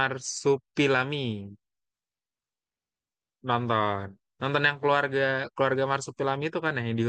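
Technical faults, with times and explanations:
No technical faults can be heard in the speech. Nothing in the recording calls for a time or an explanation.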